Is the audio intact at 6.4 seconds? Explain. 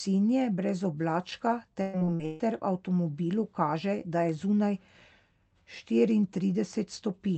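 Yes, the speech at 6.4 seconds is intact, with no dropout, glitch or other fault at that moment.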